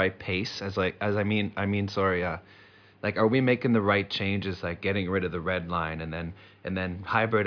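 No technical faults can be heard in this speech recording.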